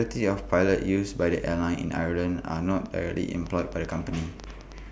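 A speech recording carries a train of clicks from 2.86 s to 4.79 s. The clicks arrive at about 5.7 per second, but the spacing is uneven. Around ten of them can be heard. Each has much the same sharp shape. They stand out above the speech, peaking about 5 dB louder. They tick through pauses as well. The likely cause is interference from nearby equipment or a faulty connection or power supply.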